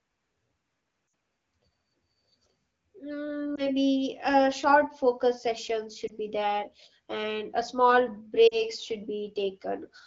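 Brief warbles and dips break the speech at 1.07–1.13 s, 3.55–3.70 s, 6.07–6.12 s and 8.48–8.62 s, with the first and last longer runs that drop to near silence. These are lost AMR speech frames. The 12.65 kbit/s wideband decoder bridged corrupted frames by reusing the last good pitch and vocal tract settings at falling gain.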